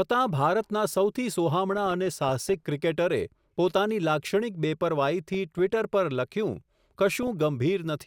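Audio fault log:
1.73–2.66 s, 5.28–5.59 s, 7.23–7.28 s: DAB burbling. A small residue of bit errors corrupts MP2 sub-band samples and scale factors, causing short noise blips and sub-band level jumps. On a spectrogram, isolated narrow bands flicker bright frame by frame.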